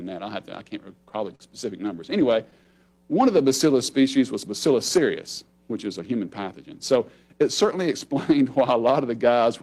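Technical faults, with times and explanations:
1.35 to 1.42 s, short stall from a late packet: a packet failed to arrive on time and the jitter buffer emptied, so the receiver kept the last sound going for about 44 ms until the packet turned up, then carried on from exactly where it had stopped. Nothing is lost, but the sound at that point is held unnaturally long, with a faint buzz or dip, and everything after it sits about 44 ms later.
1.96 to 2.67 s, scattered short gaps: across this stretch roughly five packets went missing or came late, one at a time, and each tiny hole was patched by extending the preceding sound, about 50 ms of patching in all and none much longer than 10 ms. That covers only a small share of the span, so the audio stays clear but picks up brief ticks, smears and small hiccups.
2.71 to 3.78 s, jitter buffer slow-down: with its reserve running short, the receiver built it back up by repeating single pitch periods and fragments of pauses over and over, adding 85 ms. 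The audio plays at 93% speed while the pitch stays put, so sounds come out drawn out and slightly sluggish.
5.99 to 6.47 s, jitter buffer speed-up: the buffer was holding more audio than its target, so to bring the delay down the receiver cut out short pieces of one or a few pitch periods in quick succession, dropping roughly 70 ms. Playback runs at 111% speed with the pitch unchanged, so this passage sounds rushed.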